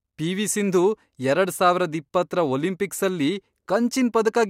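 No technical faults are audible.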